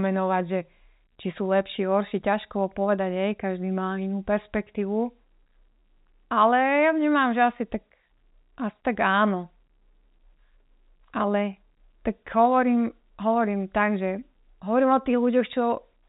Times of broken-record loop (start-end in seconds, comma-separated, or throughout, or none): none